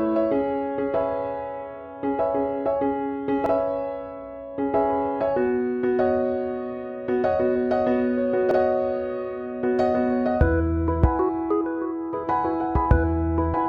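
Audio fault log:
3.46 s and 8.51 s: overlapping chunks. Each 5 s chunk starts 50 ms early. That 50 ms plays twice at each join, causing a stutter.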